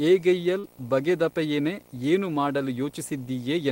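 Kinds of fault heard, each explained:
Video or display buzz: A screen or video cable is coupling into the audio path, leaving a steady buzz at the 59.94 Hz field rate with hash above it, plus a thin whine at the 15.7 kHz line rate, roughly 25 dB below the speech throughout.
Short concealed packet loss: Around 0.59 to 0.65 s, about 40 ms of the call arrived too late to decode, so the receiver extended the preceding sound to fill the gap and then blended back, heard as a brief smear in the speech.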